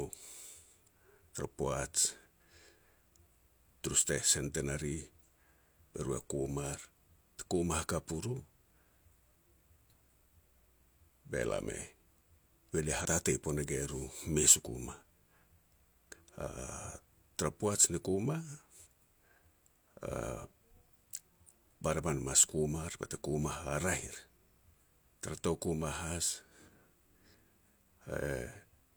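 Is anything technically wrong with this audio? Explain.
Yes. Compressed frames skipped at 12.96 to 13.06 s: damaged or missing frames weren't decoded, so the speech jumps ahead roughly 50 ms.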